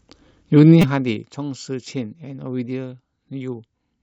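Zipper noise runs from 0.71 to 1.26 s while the speech level falls by roughly 15 dB. The gain moves in coarse, unsmoothed steps, about 50 per second, and each jump leaves a tiny click, so a fine ticking rides on the sound throughout the drop.

A repeated buffer follows at 0.82 to 0.84 s, inside that fade. Fresh audio arrived late, so the output replayed its last block several times, which fits a 5 ms buffer. The hard joins produce a brief buzzy click, and about 20 ms of speech goes missing.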